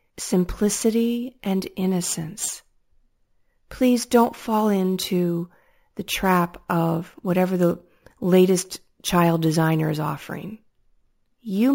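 From start to finish, the speech carries a bright, metallic fizz that rises and falls with the voice and tracks its level, sitting about 18 dB below it. The lowest copy lies between 8 and 16 kHz and moves against the pitch. This is imaging from sample-and-hold upsampling. Each sample was simply repeated with no smoothing filter, which fits a 16 kHz original raised to 44.1 kHz, so mirrored spectra fold up around multiples of the old rate.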